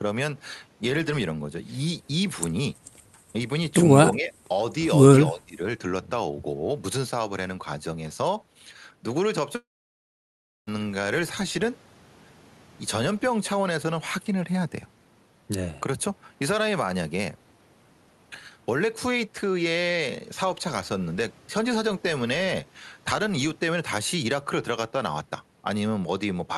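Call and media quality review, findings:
Speech suppressed in double talk, 4.16–4.34 s and 5.31–5.61 s: level dips of about 10 dB and about 20 dB. Likely echo canceller attenuating near-end talker. Waveform shows notched envelope; spectrogram thins above mid-band.

Long network dropout, 9.55–10.69 s: brief fading buzz, then about 1 s of silence; roughly 1.1 s of audio lost. Likely packet loss beyond concealment. Flat waveform gap; blank spectrogram columns. Opus band edge near 12 kHz throughout.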